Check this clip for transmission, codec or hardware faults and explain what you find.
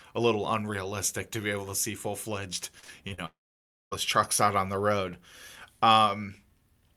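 Two transmission faults sit back to back in the middle of this speech clip.

Repeated packet loss (robotic sound) runs from 2.79 to 3.20 s. Four short holes open in the stream, the longest 36 ms. Each is patched by stretching the preceding sound, so about 30% of that stretch is concealment rather than real speech. It sounds choppy. On a spectrogram, harmonics freeze into flat, smeared bands at each gap. The waveform shows repetitive, periodic patches.

A long network dropout follows from 3.26 to 3.93 s, with about 660 ms of speech missing. The likely cause is a lengthy break in packet delivery. The receiver briefly extends the last sound as a fading buzz or hiss, and then roughly 570 ms of silence remains before speech resumes without the lost part. On the waveform this appears as a short decaying tail followed by a flat line. On the spectrogram it is a smeared fade into a near-empty gap.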